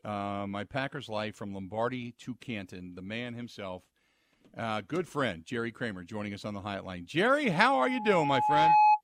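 From 7.43 s, right after "us on the line", a loudspeaker feedback squeal swells at 845 Hz over roughly a second and a half until 9.01 s, ending about 10 dB above the speech.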